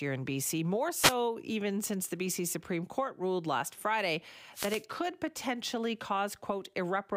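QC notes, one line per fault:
0.99–1.15 s and 4.52–4.85 s, wireless microphone noise hit: short static swishes where the radio link fades, so receiver noise rises under the speech.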